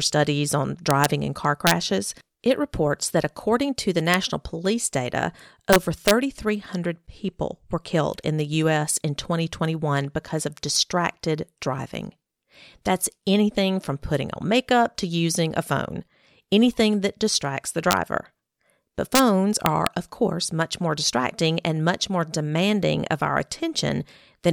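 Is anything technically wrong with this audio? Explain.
Yes. The speech suffers from integer overflow at seven points: 0.91 to 1.05 s, 1.67 to 1.71 s, 4.14 s, 5.73 to 6.11 s, 17.91 to 17.93 s, 19.15 to 19.20 s and 19.66 to 19.87 s. Peaks reach or exceed full scale by up to about 2 dB. Instead of being held at the limit, those samples wrap around to the opposite extreme. Each wrap is a full-range jump. The result is harsh, snapping cracks on the loudest moments, far sharper than ordinary clipping.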